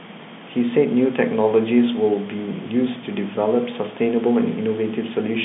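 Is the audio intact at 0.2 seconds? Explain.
Yes, the audio is intact at 0.2 seconds: nothing goes wrong at that moment, and the speech there simply carries the narrow telephone band of G.711 coding.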